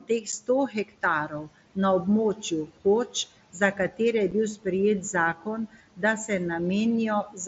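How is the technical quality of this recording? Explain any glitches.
The recording is clearly degraded by an aggressive noise suppressor and two brief Bluetooth dropouts, all heard over a wideband mSBC headset link with room noise in the background.

Noise suppressor artifacts run throughout: the suppressor pulls steady noise down by about 18 dB between phrases, so the background pumps, sinking between words and rising under them. On a spectrogram this shows as a gated noise floor that appears mostly under the speech.

Speech cut by the noise suppressor occurs at 0.00–1.77 s, 2.35–3.15 s, 3.53–4.00 s (just before "je bil"), 5.01–6.30 s (just after "je bil") and 7.25 s to the end. The suppressor mistakes soft speech for noise and turns it down by up to about 19 dB, leaving parts of the speech swallowed or faint. These appear as faded, missing patches of harmonics.

Unconcealed Bluetooth headset packet loss occurs at 0.32 s and 4.31 s. 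A single 7.5 ms voice frame is dropped and not filled, leaving a tiny hole with abrupt edges. In the waveform it appears as an abrupt gap, and on the spectrogram as a thin vertical line.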